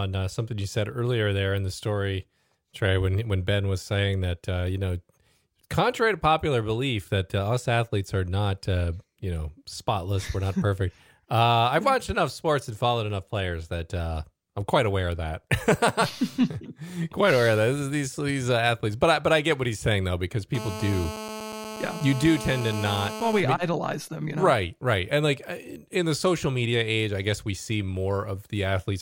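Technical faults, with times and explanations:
20.55–23.40 s GSM phone buzz: a steady, raspy 217 Hz buzz about 10 dB below the speech, caused by a nearby phone's call bursts being rectified in the audio circuit.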